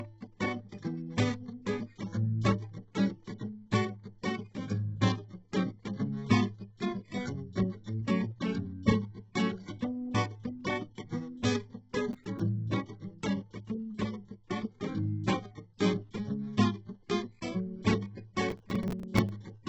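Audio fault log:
Throughout: HE-AAC compression (likely cause). The spectrum stops at about 7.9 kHz, and the upper treble is rebuilt from copied lower bands, so its harmonics don't line up and the highs sound gritty and metallic. The heavy damage fits a bitrate near 8 kbps.
12.13–12.40 s and 18.50–19.30 s: processor overload crackle. Successive buffer deadlines are missed, and each miss replays a scrap of old audio with hard edges. The result is a gritty tearing over the music. The spacing fits buffers of roughly 5 ms, and the second burst is longer.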